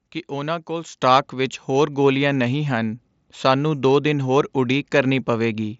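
At 1.02 s the call software judged the microphone too quiet and raised the device's input volume in a single step, a microphone volume stepped up fault of about 7 dB. Because the change happens at the input, voice and background jump louder together, right before "ਵਿੱਚ ਹੋਰ ਗੋਲੀਆਂ ਨਹੀਂ", and stay at the higher level. The lift is heard through a Bluetooth mSBC headset path that carries nothing above about 7.7 kHz.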